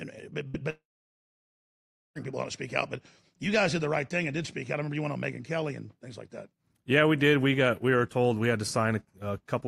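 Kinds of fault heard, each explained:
Burst of packet loss: At 0.47 to 0.56 s a short run of packets never made it in time, so the receiver stretches the last bit of speech into a brief fading smear, and about 60 ms of audio is simply skipped.
Long network dropout: From 0.70 s the sound trails off into a fading fill, then goes silent for about 1.3 s, likely a stall in the network link. Speech returns at 2.17 s with "people not to speak", with about 1.46 s lost.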